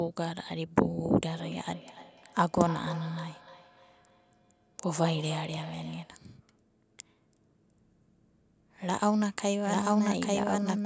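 From 1.33 to 6.25 s, two devices on the same call loop sound between them, one's loudspeaker feeding the other's microphone where no echo canceller catches it. This feedback echo between two devices returns the speech roughly every third of a second, thin and ringing, peaking about 16 dB below it.

From 9.65 s to the end, a second capture of the speech, likely through a slower path, is mixed in as a doubled audio track. An equally loud full-band copy trails about a second behind, dry and undecaying, and cuts in abruptly.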